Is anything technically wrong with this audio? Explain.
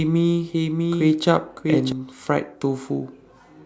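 Yes. From the start until 1.92 s the sound carries a doubled audio track: a second full-band copy trails about 0.7 s behind, some 5 dB quieter, likely from a slower capture path. Unlike an echo, it has no decay or room colour and stops abruptly.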